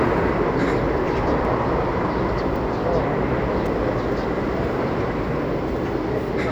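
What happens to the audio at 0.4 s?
Nothing goes wrong at 0.4 s: the sound plays through that moment intact, with no dropout, click, distortion or other fault.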